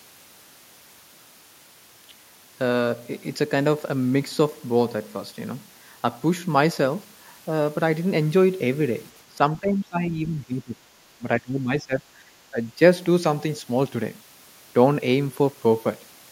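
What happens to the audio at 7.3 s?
Nothing goes wrong at 7.3 s; the speech there plays through intact, with no dropout, click or distortion to be heard.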